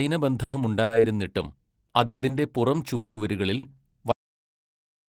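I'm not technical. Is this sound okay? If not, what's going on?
No. The speech stops and starts in a few places, and the last second goes dead.

At 0.43–0.56 s, 2.06–2.25 s and 2.96–3.20 s there are call audio freezes: the last sound hangs as a fading buzz for about 0.1 to 0.2 s, with a brief moment of silence at 2.06 s, and then the speech resumes where it left off. This is likely packets held up on their way across the network.

At 0.83–0.93 s and 3.59–3.66 s there are short stalls from a late packet. These are briefer, at 70 and 40 ms. A sound is held slightly too long with a faint buzz or dip. Nothing is lost, but the hold is shorter than a freeze.

From 2.70 to 3.89 s there is a jitter buffer slow-down. The speech plays at about 97% speed at the same pitch, adding roughly 45 ms overall. Sounds feel drawn out rather than interrupted.

From 4.12 s to the end there is an audio dropout to silence. 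The speech cuts off into total silence with no background left, so whatever came after is gone. The likely cause is lost input, such as a disconnect or an accidental mute.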